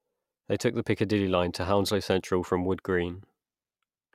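Nothing in this speech stands out as a technical fault, so there's no glitch, dropout or break to point to at any moment.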